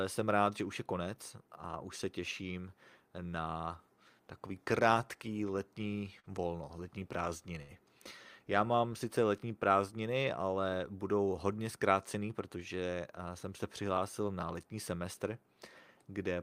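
Speech with two short stalls from a late packet and one jitter buffer speed-up. The first stall, at 6.19 to 6.26 s right after "na takový krátký letní" and before "volno letní", holds the last sound for 44 ms. The second, at 7.62 to 7.71 s after "krátký letní volno letní", stretches it for 71 ms. In both, the packet arrived late and the buffer ran dry, so the receiver sustained the sound until it came and then resumed from the same point. Unlike a dropout from a lost packet, no speech is skipped: a sound simply lingers too long, with a faint buzz or dip, and everything after it lands slightly later. From 12.14 to 12.57 s the jitter buffer speed-up runs the speech at about 107% speed. The receiver trimmed around 40 ms of excess buffered delay by removing short pitch-period slices in quick succession. The pitch stays where it was, which separates this from a sample-rate or playback-speed error: the speech sounds hurried rather than higher.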